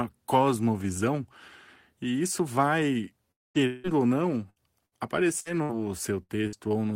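At 3.31 s the speech breaks off for about a quarter second, until 3.58 s. A second break follows from 3.67 to 3.87 s. Both are likely a long network dropout. The receiver stretches the last sound into a fading buzz. The lost speech never returns.

From 4.50 to 6.68 s there is repeated packet loss, giving a robotic sound. Seven short gaps occur, the longest 62 ms. Each is patched by repeating the last sound. About 16% of this stretch is filled in, so it sounds choppy.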